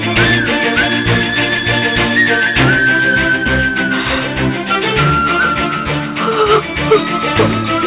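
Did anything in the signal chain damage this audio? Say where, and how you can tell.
No, nothing audible points to damage at any stage of the chain: level, continuity and timing hold steady, with no break, distortion or added noise.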